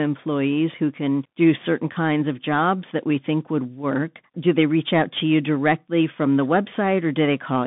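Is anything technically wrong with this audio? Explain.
Yes. Throughout, the speech carries Bluetooth CVSD headset codec damage: a 150 Hz to 3.6 kHz band with nothing above 3.8 kHz, plus scratchy sibilants and granular hiss from one-bit slope tracking, which fits a 64 kbit/s link.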